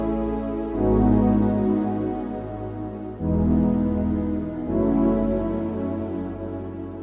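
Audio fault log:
No faults were found in this clip. Nothing in the audio calls for an entry in the log.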